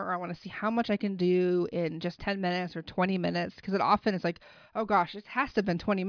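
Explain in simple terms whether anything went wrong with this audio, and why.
Nothing went wrong here: the speech recording has no audible faults anywhere in the clip.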